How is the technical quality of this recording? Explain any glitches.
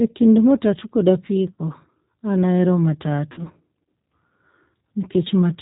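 The technical quality is limited by codec processing, with two brief dropouts. Throughout the clip, the speech carries plainly audible G.729 codec damage. Nothing above 4 kHz is present, and the voice sounds rough and slightly synthetic. That fits low-rate G.729 at 8 kbit/s, which rebuilds each frame from a vocal tract filter, pitch predictor and a few pulses.

There are two instances of VoIP packet loss concealed by the speech codec. The first runs from 1.54 to 1.61 s, just after "kind matatu kod", covering about 40 ms of lost audio. The second runs from 3.32 to 3.42 s, after "an ahero", covering about 50 ms. At each point the decoder stretches its last pitch and filter into a buzzy tone or coloured noise that fades, and the speech stays weakened briefly afterwards.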